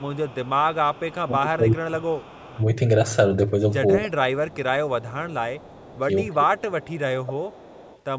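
Echo leak at 0.0 to 1.16 s: a faint copy of the speech trails about 303 ms behind, roughly 25 dB down. This is likely because a far-end loudspeaker's echo canceller let residue through. Speech suppressed in double talk at 1.25 to 2.62 s: the talker dips by roughly 20 dB, likely because the canceller ducked both sides while both talked. The echo leak recurs at 1.75 to 2.65 s. Suppression returns at 4.08 to 5.37 s with roughly a 25 dB drop. Echo is heard at 5.01 to 6.0 s. Suppression occurs again at 6.02 to 7.56 s, roughly 20 dB. Echo appears at 6.58 to 7.01 s, fainter at about 30 dB down, and at 7.51 to 8.01 s.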